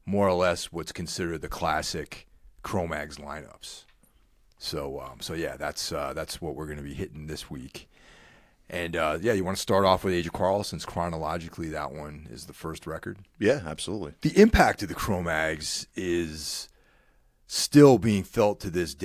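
No technical faults can be heard anywhere in the recording; the speech signal stays intact and continuous throughout.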